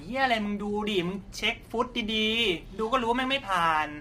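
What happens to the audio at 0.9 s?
At 0.9 s the speech is passing through what is likely low-delay AAC compression, the AAC-ELD style codec of video calls, and heavily strained at a rate that fits roughly 24 kbps; this runs through the whole clip, not just that moment. At so low a bitrate its coding is too coarse to keep the spaces between the pitch harmonics clean, so noise fills the gaps between them and the top band sounds thin and synthetic, leaving the voice rough and grainy.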